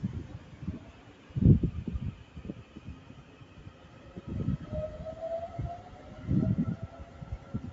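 From start to finish, a noise suppressor applied to music or sounds is at work on these everyday sounds. It was built for speech. It treats steady, sustained sound as noise and pulls it down. Sharp onsets pass through. The held parts and decaying tails sink by roughly 10 dB. The level keeps swinging, so the sound pumps and thins between hits. The band stops at 8 kHz, which fits the call path.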